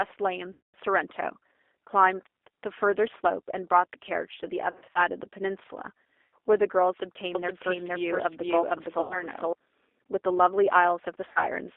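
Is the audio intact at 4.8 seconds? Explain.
No. VoIP packet loss concealed by the speech codec covers 4.71 to 5.00 s. About 160 ms of audio is missing, scattered across roughly 240 ms, with the longest gap about 40 ms. With 10 ms frames, that fits around sixteen lost frames. The decoder fills each gap by repeating its last pitch and filter at falling gain, so the speech turns buzzy and smeared, weakens, and stays thin for a moment after real packets resume.

The same stretch also carries the G.729 codec damage present throughout. The signal is rebuilt at 8 kbit/s from a vocal tract model and a few pulses per frame, inside a line band of about 300 Hz to 3.6 kHz. That gives the speech a plainly audible rough, synthetic edge and removes everything above that band.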